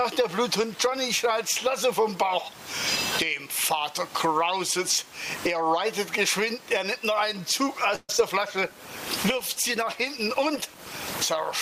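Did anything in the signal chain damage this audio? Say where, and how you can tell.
Yes. Gain pumping runs through the whole clip: the gain swings by around 25 dB, pulled down on each loud sound. The likely cause is gain set too hot at the mic stage, with a fast limiter clamping down.

There's a call audio freeze from 7.95 to 8.10 s. The sound continues as a fading buzz or hiss, with roughly 30 ms of silence, then resumes where it stopped. That's likely a jitter buffer running dry on the network side.

Short concealed packet loss follows at 8.12–8.14 s and 8.17–8.19 s. The receiver patched the holes by extending the previous sound, so you get brief smears or wobbles.

From 8.58 s to the end there's a call bitrate drop, from 128 to 23 kbps. The codec goes coarse and loses the top end, leaving the sound rough, watery or muffled.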